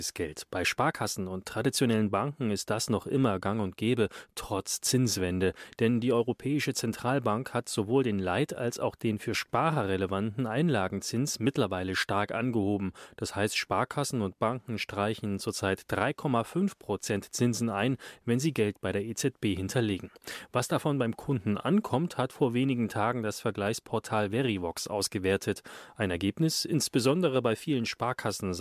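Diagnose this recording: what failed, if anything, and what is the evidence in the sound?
Nothing in the speech stood out on listening as a fault at any stage of the recording chain.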